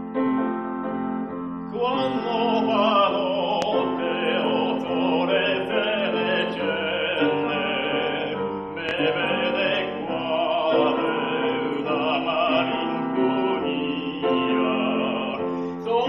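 Two loud pops break into the audio. The first runs from 3.62 to 3.66 s. The second runs from 8.89 to 8.93 s. Each lasts about 40 ms and sounds as a single sharp thump. The first peaks roughly 20 dB above the surrounding sound, and the second roughly 15 dB. The audio carries on underneath both. The cause is likely a sudden electrical step, such as a plug, switch or static discharge, shaped by the circuits that follow.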